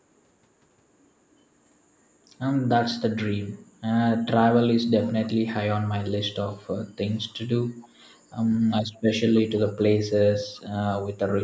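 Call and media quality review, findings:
Echo leak, 7.81–7.88 s: far-end echo canceller likely passed residual loudspeaker pickup; a very faint, brief scrap of the speech returns 291 ms late.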